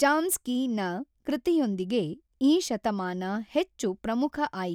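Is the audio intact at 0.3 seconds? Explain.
Yes, the audio is intact at 0.3 seconds, with no audible fault at that point in the speech.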